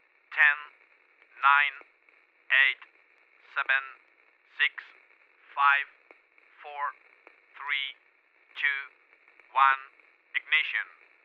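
No technical faults are audible.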